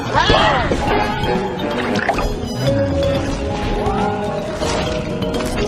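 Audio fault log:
No audible faults detected.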